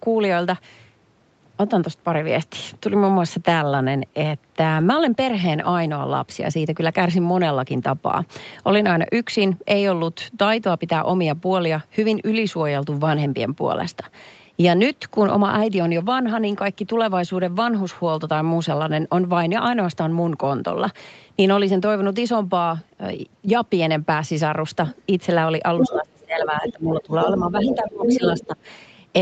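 At 4.75 to 4.81 s, 8.83 to 8.85 s and 16.05 to 16.11 s, lost packets were rebuilt from error correction. Low-bitrate copies filled each gap, so these moments sound briefly rough and noisy rather than silent.

From 25.79 s, the other side's voice leaks through, likely from a loudspeaker the echo canceller did not fully clear. It appears at 25.79 to 26.0 s at about the speech level, at 26.66 to 26.73 s about 10 dB lower, at 27.01 to 27.34 s about 5 dB lower, and at 27.56 to 28.47 s at about equal level.

Speech is suppressed in double talk at 25.81 to 27.13 s, 27.4 to 28.22 s and 28.39 to 28.58 s. The likely cause is the echo canceller ducking both voices at once. The talker dips by roughly 25 dB at worst, then by roughly 15 dB.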